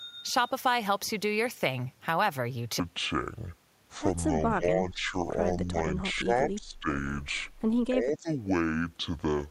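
A section at the wrong speed runs from 2.80 s to the end of this speech clip, played at 0.562 times its original speed, so the voice drops by roughly ten semitones and drags slow and deep, likely because that part was fitted to the wrong clock. Speech suppressed in double talk appears at 4.56–5.14 s, 5.64–5.75 s, 6.14–6.88 s and 7.89–8.29 s: the voice dips by about 15 dB in three of these (about 5 dB at 5.64 s), likely where an echo canceller confused it with loudspeaker echo while both sides talked.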